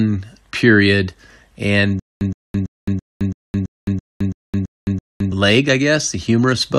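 Right after "period and", at 2.00 s, the speech breaks into a stutter with silent gaps. A 118 ms fragment repeats ten times, each followed by about 214 ms of dead digital silence, on a steady 333 ms cycle until 5.32 s, when normal playback resumes at "leg I". The likely cause is a stalled player or stream that replayed its last buffered fragment on each retry and then ran dry, losing the audio in between.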